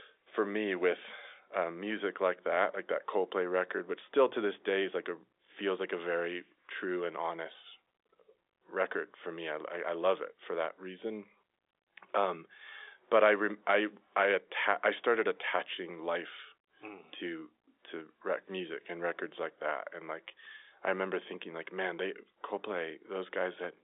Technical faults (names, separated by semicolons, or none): none